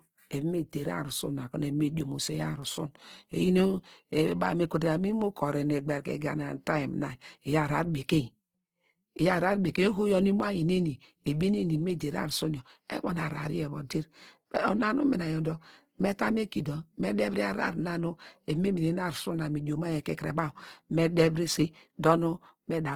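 All the way through, this speech has a rough, grainy texture that sounds like Opus compression, likely in its music mode at a low rate around 16 kbps. With too few bits, bands get filled with folded or noisy content, so tones turn hissy and coarse while the top still reaches about 20.4 kHz.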